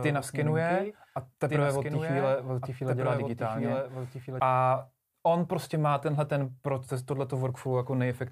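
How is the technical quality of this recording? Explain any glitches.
A doubled audio track runs from the start to 4.4 s. A second, full-band copy trails about a second and a half behind, roughly 5 dB quieter, likely from a slower capture path. It cuts off abruptly, with no decay or room colour.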